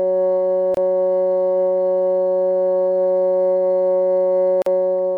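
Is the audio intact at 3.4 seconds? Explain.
Yes, the music plays through cleanly at 3.4 s, with no dropout, click, distortion or other fault at that moment.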